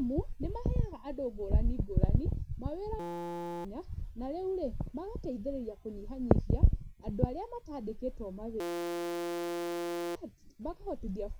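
At 3.00 to 3.65 s and again at 8.60 to 10.15 s, a system hang loop replaces the speech with a steady 172 Hz buzz. A 5.8 ms slice, which fits a 256-sample buffer, repeats exactly. The spectrogram shows flat harmonic stripes, and the waveform shows an identical repeating tile.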